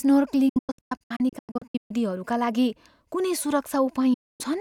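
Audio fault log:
0.49–1.91 s, digital broadcast dropout: a string of short mutes scattered across about 1.4 s, totalling about 0.83 s of missing sound, the longest single hole 128 ms. Each gap fades out and back in within 8 ms, so the breaks sound like fast chops rather than clicks. The receiver silenced itself whenever it lost the signal or frames failed their checksum, which fits frames of about 32 ms.
4.14–4.41 s, digital broadcast dropout: about 0.26 s of muted sound with the same 8 ms fades. The audio sent during that gap is lost.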